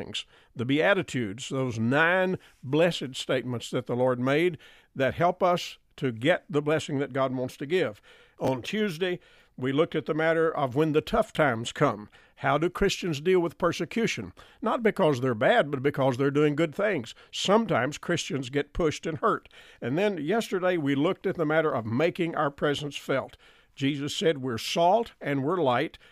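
At 8.45 to 8.48 s, just after "wants to give", there is a chunks-out-of-order fault. A 10 ms chunk plays two chunks late, after the audio that should follow it. The order of the speech is jumbled for an instant, with three hard joins. A shorter instance at 11.35 to 11.37 s, after "of when the tough", holds a 10 ms chunk back by one position and gives a similar brief garble.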